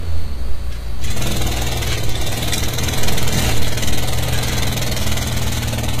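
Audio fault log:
Throughout, HE-AAC compression: the top end sounds bright but synthetic, with gritty, metallic sizzle in the treble and nothing at all above 14.9 kHz, and the damage is plainly audible across the whole 6 s. The likely cause is HE-AAC at a low rate, fitting roughly 20 kbps. Only the lower band is truly coded, and the treble is rebuilt by copying lower bands upward under a coarse envelope, so its harmonics no longer line up with those below.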